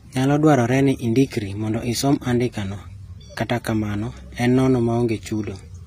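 Throughout the speech, the upper band sounds bright but synthetic, with sibilants turning gritty and metallic, and nothing above 15.4 kHz. This is likely HE-AAC compression at a low bitrate around 24 kbps: the treble is rebuilt from copied lower bands rather than simply cut off, unlike a plain low-pass codec.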